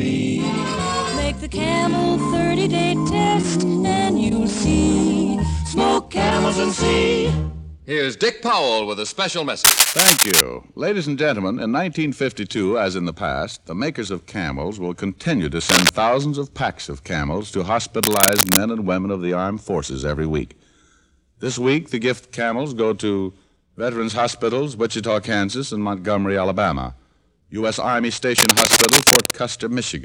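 Bursts of harsh scratching and rustling, a little louder than the sound itself, cut in at 9.64–10.41 s, 15.69–15.90 s, 18.03–18.58 s and 28.38–29.31 s. This cable scratch noise likely comes from a worn cable or connector whose contact resistance flickers as it moves.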